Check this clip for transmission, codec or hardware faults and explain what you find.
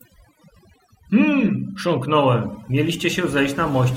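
One fault runs through the whole clip: overdone noise removal. It is present from start to finish. A noise reduction stage was pushed too hard on a noisy recording. It compares each frequency band against its idea of the noise. Bands near that level get cut deeply or switched off. Quieter parts of the speech fall below the line and vanish too. The background drops, dotted with twinkling specks.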